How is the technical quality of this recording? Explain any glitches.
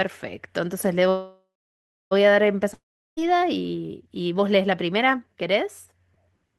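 The recording has two network glitches, both in the first half.

From 1.09 to 2.13 s there is a call audio freeze. Packets were likely held up in transit, so the jitter buffer ran dry. The receiver stretched the last sound into a fading buzz, then about 0.66 s of silence, before resuming exactly where it stopped. Nothing is lost, but everything after arrives about 1.02 s later.

From 2.74 to 3.20 s there is a long network dropout. The packets likely never arrived, and about 0.44 s of audio is missing. The receiver filled the gap with a decaying hiss that becomes roughly 0.37 s of silence, and the speech then resumes further along, skipping the lost part.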